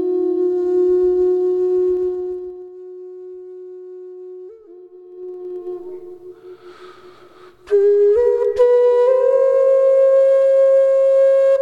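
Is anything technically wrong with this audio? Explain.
Yes. Zipper noise appears from 1.94 to 2.72 s and from 5.04 to 5.76 s: the gain moves in unsmoothed 2 dB steps, about fifteen to twenty a second, dropping roughly 20 dB then rising by about the same. Each jump leaves a small click, heard as ticking riding on the fade.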